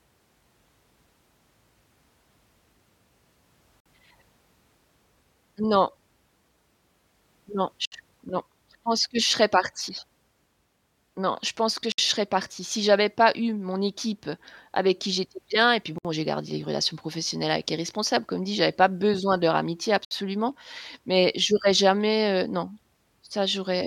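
Short silences cut into this speech clip at 3.80, 7.86 (before "non je pense que"), 11.92 (between "je pense que" and "je serais partie"), 15.98 (between "j'étais bien et puis" and "j'ai gardé une relation") and 20.05 s, every 4.0 s. The first lasts 54 ms, the rest 64 ms. These are gaps at a join of encoded pieces. Separately encoded 4-second segments were joined without trimming each encoder's start-up delay and final-frame padding.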